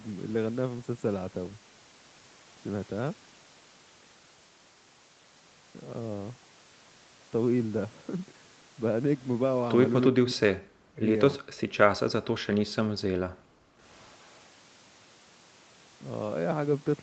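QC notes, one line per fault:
10.11–11.07 s and 12.03–12.66 s, speech suppressed in double talk: the talker's speech sinks sharply, by roughly 40 dB at its deepest, for roughly 0.7 s in each stretch. The likely cause is the echo canceller failing to separate the local talker from loudspeaker echo while both sides spoke, so it turned everything down. Unlike gating, the loss falls on the speech itself, not just the room sound between phrases.
11.39–11.74 s and 12.94–13.81 s, background gated by the echo canceller: the room tone drops by about 40 dB, briefly around 11.4 s and for roughly 0.7 s near 13 s, then comes back as the canceller releases. Here the microphone was clamped while the loudspeaker played, so what disappears is the ambient bed rather than the talker. It is heard as a hole of near-silence, distinct from the speech loss of double talk.
13.99–14.37 s, echo leak: a faint delayed copy of the speech trails the original by 365 ms, sitting roughly 40 dB below it. 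This is likely residual loudspeaker sound the far side's canceller failed to remove and sent back. The clear fixed lag sets it apart from reverberation, which smears continuously rather than repeating the sound after a gap.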